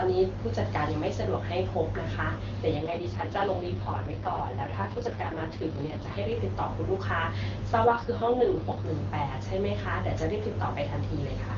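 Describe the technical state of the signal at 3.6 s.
At 3.6 s, an AMR rate drop is under way, spanning 2.76 to 6.33 s. The speech turns rough and synthetic, with no gap or band loss. This fits a fall to the lowest 6.6 kbit/s mode.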